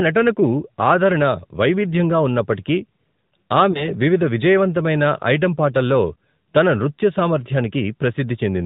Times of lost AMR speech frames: 3.72-3.90

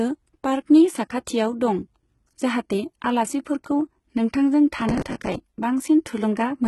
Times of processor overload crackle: 4.77-5.35

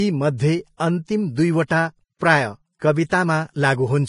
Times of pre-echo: 1.67-1.70, 3.09-3.12

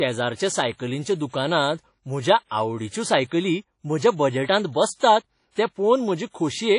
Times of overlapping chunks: none

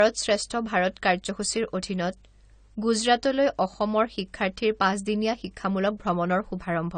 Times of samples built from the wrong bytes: none

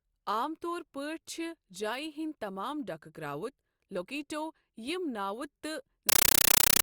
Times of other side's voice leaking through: none

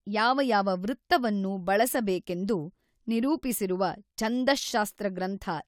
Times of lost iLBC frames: none

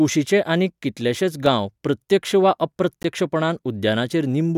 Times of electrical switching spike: none

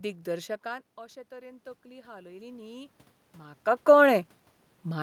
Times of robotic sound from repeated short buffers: none

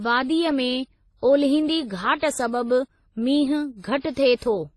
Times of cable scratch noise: none

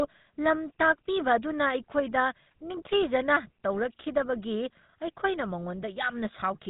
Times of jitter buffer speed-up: none

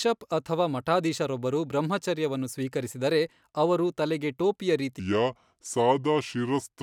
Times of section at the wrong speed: 5.00-6.82

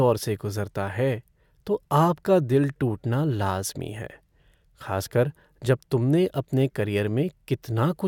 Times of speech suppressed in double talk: none

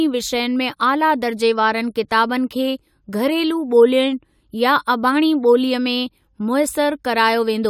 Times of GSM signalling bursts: none

